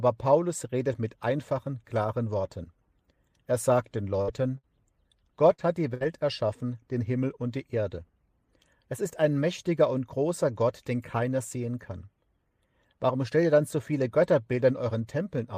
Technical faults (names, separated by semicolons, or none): burst of packet loss